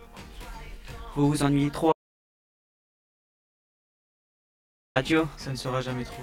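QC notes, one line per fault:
throughout: channel delay (comb filtering). One channel trails the other by about 20 ms, and the mono sum carves fixed, evenly spaced notches from the bottom up, giving a rough, slightly doubled tone rather than a decaying reverb tail.
1.93 to 4.96 s: audio dropout to silence. About 3.03 s falls to silence with no room tone, unlike a gate or level dip, likely from the input signal being lost.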